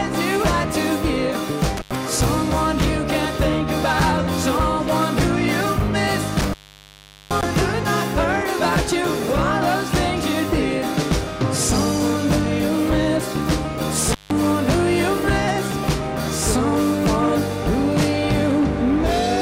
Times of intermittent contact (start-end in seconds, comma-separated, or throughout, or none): 1.77-1.95, 6.38-7.43, 14.12-14.31